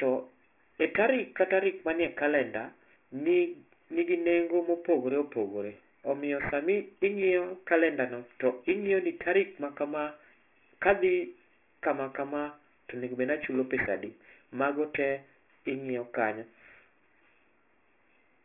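All the way through, the speech carries aliasing. The band stops hard at 3 kHz, which fits a sample-rate drop from 48 kHz down to 6 kHz with no anti-alias filter beforehand. Everything above 3 kHz folds back down into the band as unrelated tones, sitting roughly 15 dB under the speech. You hear that as gritty, metallic sibilants, with the spectrum crammed right up against the 3 kHz edge.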